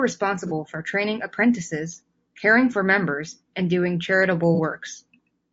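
Across the whole speech clip there is a rough, grainy texture, with noise filling the gaps between harmonics and a top band that sounds thin and partly synthetic. This is plainly audible low-delay AAC compression, likely AAC-ELD at a rate that fits about 32 kbps. Its very short frames cannot separate closely spaced harmonics well, so the damage is a steady graininess. That sets it apart from ordinary AAC's pre-echo smearing or watery swirling.

At 0.47 to 0.52 s and again at 4.55 to 4.60 s, a brief smeared, noisy patch breaks into the sound, each about 30 ms of lost material. These are AAC frame losses with concealment. The decoder lost one frame each time and patched the gap from the previous spectrum, which gives a hazy smudge instead of a click or a dropout to silence. The losses are too short for the fill to fade away.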